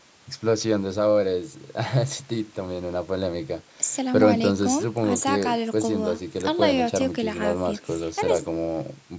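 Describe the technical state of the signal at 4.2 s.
At 4.2 s the speech signal is intact, with no dropout, distortion or other fault, only the band-limited sound of ordinary call microphone processing.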